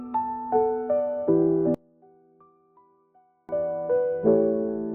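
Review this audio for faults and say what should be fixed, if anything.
One channel inverted is the likely cause of the collapse between 1.74 and 3.49 s. With one side's polarity flipped, everything common to left and right cancels when the two are combined to mono, so the centred content and low end fall away and the level drops by about 34 dB. What remains is only the small difference between the channels, a faint trace of the sound until normal level returns at 3.49 s. Checking polarity on every channel and monitoring a mono fold-down before release would catch this inversion.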